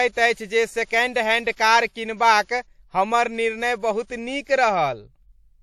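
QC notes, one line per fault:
Throughout, WMA compression: the speech has a ringing, washy quality, with a hiss that swells and fades along with the signal, and the damage is plainly audible. Nothing reaches above about 19.4 kHz. The likely cause is a WMA transform encoder using long blocks, which smears quantisation noise across tens of milliseconds around each sound and drops weaker spectral detail, a level of loss that fits a bitrate around 48 kbps.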